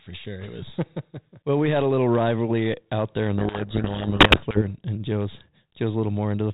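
A codec payload misread runs from 3.38 to 4.62 s, after "rivalry out there in": the decoder reads G.726 code words in the wrong bit order, burying the speech in harsh distortion until "and and".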